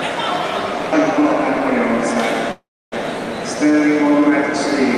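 At 2.51 s the sound stalls into a fading tone that drops to silence for about 0.3 s, then resumes at 2.94 s with nothing lost, just 405 ms later. This call audio freeze likely came from delayed packets draining the jitter buffer.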